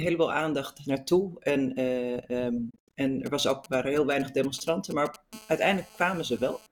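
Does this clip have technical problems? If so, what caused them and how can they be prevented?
Yes. Between 2.70 and 2.97 s the sound cuts out in several gaps, about 168 ms in total spread over 252 ms, the longest 84 ms. It resumes further on rather than where it stopped. This is likely a Bluetooth dropout: late packets were discarded. Unlike an edit, no sound is repeated. Keeping the headphones close to the source, away from Wi-Fi traffic, prevents it.

From 3.26 to 5.16 s there are GSM signalling bursts: a galloping dit-dit-dit of short 217 Hz buzzes, roughly 20 dB below the sound. A nearby 2G phone sending brief groups of bursts is rectified by the audio circuitry. Unlike a steady buzz, it comes in clusters. Moving phones away from the equipment prevents it.

From 5.33 to 6.67 s a continuous GSM phone buzz appears, a raspy 217 Hz tone rich in harmonics about 25 dB below the sound. This is a phone in a call transmitting 217 bursts per second, with the audio circuit rectifying them. 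Unlike mains hum at 50 or 60 Hz, it is higher and harsher. Putting phones in flight mode near the equipment prevents it.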